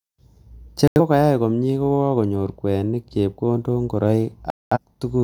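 At 0.88 s the speech mutes abruptly in a digital broadcast dropout: the receiver stopped getting valid frames and went silent until clean ones returned at 1.00 s, just before "komnye kokonyor kweinik". A longer hole follows from 4.50 to 4.78 s, consistent with about five lost frames. Each gap shows on a spectrogram as a full-height blank band with sharp edges, and as a flat line in the waveform. The speech sent during the gaps is simply missing.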